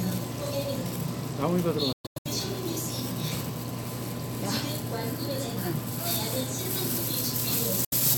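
At 1.92 to 2.27 s, the sound breaks into several silent gaps, the longest about 116 ms. The sound resumes further on, as if it had kept playing. This is a Bluetooth dropout, likely from late packets being discarded. A shorter gap follows at 7.85 to 7.94 s.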